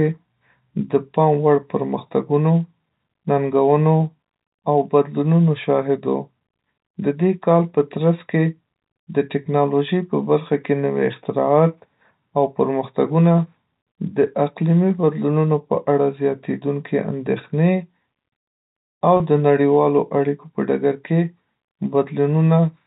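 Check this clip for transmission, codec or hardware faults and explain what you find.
One transmission fault stands out in the speech, a brief packet loss with pitch repetition at 19.17 to 19.20 s, just before "د نړیوالو اړیکو په". About 30 ms of audio went missing, which fits a single lost packet. The receiver bridged it by repeating the last pitch period. It sounds like a momentary held, slightly buzzy tone rather than a gap. That is what separates it from a plain dropout, which would leave a hard silence or a click. The band stops at 4 kHz, consistent with G.711 telephone coding, with at most faint quantisation noise.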